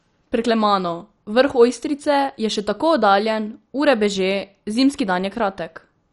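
Throughout, the speech sounds dull and gurgling, with nothing above 11.3 kHz. This is likely MP2 compression starved of bits, switching off upper sub-bands.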